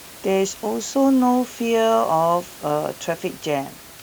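No technical faults are audible.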